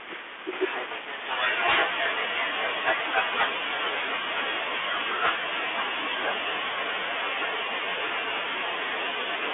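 Bluetooth CVSD headset codec damage runs through the entire speech recording. The band is confined to roughly 250 Hz to 3.4 kHz, and the one-bit delta coding, consistent with a 64 kbit/s link, leaves a granular hiss, scratchy sibilants and distortion where loud high content outpaces the adaptive step size. A sudden gain jump at 0.53 s lifts the level by about 6 dB and holds it there to the end, with the background noise rising in step. The likely cause is a digital gain setting applied instantly rather than ramped.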